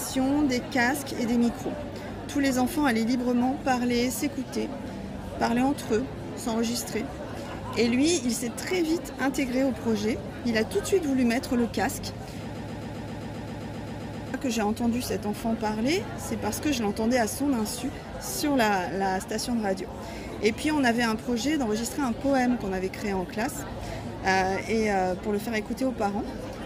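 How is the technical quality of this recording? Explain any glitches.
One glitch stands out. A broken-record loop from 12.55 to 14.34 s: a 0.13 s fragment repeats 14 times, likely from a stalled player or stream, stuttering mechanically and appearing as identical repeating blocks on the waveform and spectrogram.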